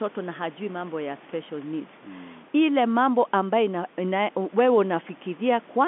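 No faults: the speech sits in a telephone band of roughly 200 Hz to 3.5 kHz, consistent with 64 kbps G.711 A-law coding, with at most faint coding grain, and the room noise sits about 29 dB below it.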